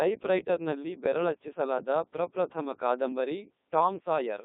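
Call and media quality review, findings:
Codec 2 vocoder artefacts, whole clip. Speech robotic and buzzy, heavy damage throughout. Probable component: low-rate digital-radio vocoder; sound fits Codec 2 at its top 3.2 kbit/s mode. Mechanism: only pitch, voicing, energy and spectral envelope transmitted; decoder rebuilds speech from sine waves, original waveform discarded. Line band 200 Hz to 3.7 kHz.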